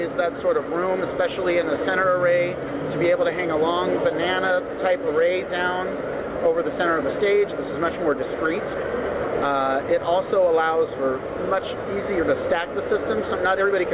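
No faults are audible; the sound arrives over a narrowband call path with nothing above 4 kHz, which fits a G.711 mu-law link.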